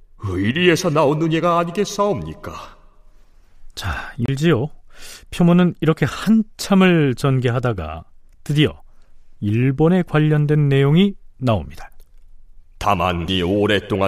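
A speech recording whose disc player skipped twice, a CD skip at 4.26–4.28 s and again at 13.28 s, each a tiny mute before playback resumes elsewhere.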